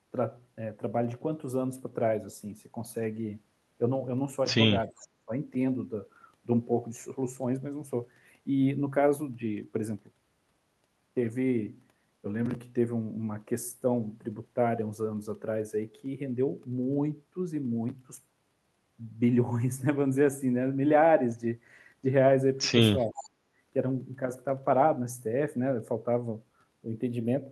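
A speech recording with brief call-processing faults. The voice sinks sharply at 4.86–5.32 s, by roughly 30 dB, and dips more gently at 23.0–23.17 s. This is speech suppressed in double talk, likely the echo canceller turning down both its own talker and the loudspeaker echo while the far end spoke. A faint copy of the voice, some 20 to 25 dB down and trailing by 372 ms, surfaces at 4.96–5.08 s and 23.12–23.29 s. This echo leak is likely loudspeaker pickup that the canceller failed to remove. At 23.45–23.53 s the room sound briefly drops by about 11 dB: background gated by the echo canceller as it clamped the microphone during loudspeaker playback.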